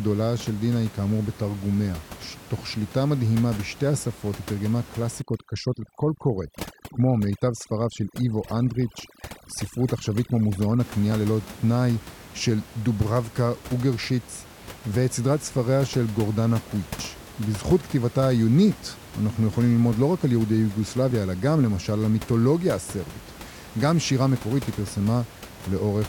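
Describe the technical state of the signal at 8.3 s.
At 8.3 s the signal is under overdone noise removal, running from 5.22 to 10.80 s. Bands near the noise estimate are gated out, so the background drops and breaks up into twinkling specks. A spectrogram shows blank gaps dotted with isolated blips.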